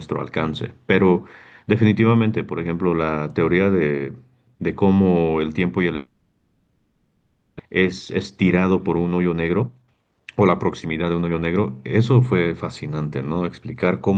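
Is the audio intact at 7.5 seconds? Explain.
No. At 7.5 s the clip is inside a likely long network dropout running from 5.95 to 7.61 s, when incoming audio stopped arriving and the receiver had to fill about 1.6 s on its own. It stretched the last sound into a fading buzz, leaving only a brief moment of true silence, before the speech returns near 7.61 s. About 1 s of the original speech is lost, and the timing afterwards runs roughly 0.7 s behind.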